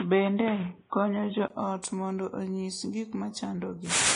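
For the first 1.5 seconds the speech sounds narrow and boxy, with nothing above 3.8 kHz, a faint noise floor sitting around 40 dB under the signal, and a level a few dB off from what follows. At 1.5 s there's a 20 ms gap, then the sound opens up just before "ot mondo onyis gik". That's an input switched to a poorer device, most likely a headset's call profile or another mic handing over to the main one.

Across the whole clip there's also a hard ceiling at 10.6 kHz, with smeary, swirly low-bitrate artefacts on the speech. The file is a high-rate MP3 around 256 kbit/s, but the damage sounds like a Vorbis pass at something like 25 kbit/s. That's low-bitrate audio saved at a high bitrate. The second encode likely just preserved what the first had already thrown away, so the bigger file can't bring the top end back.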